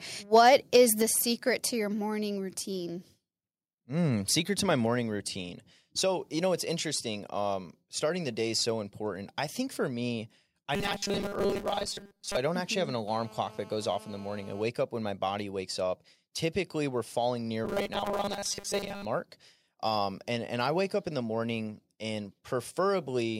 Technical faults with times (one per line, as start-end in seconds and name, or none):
0.35-0.76 microphone overload
1.02 microphone volume stepped down
10.75-12.37 robotic sound from repeated short buffers
13.08-14.63 GSM phone buzz
17.65-19.05 robotic sound from repeated short buffers